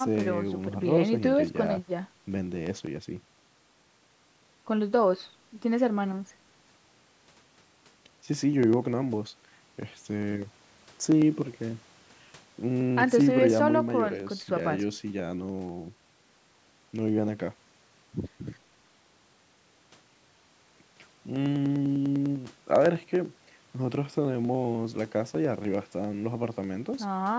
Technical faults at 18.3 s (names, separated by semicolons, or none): periodic USB or driver dropouts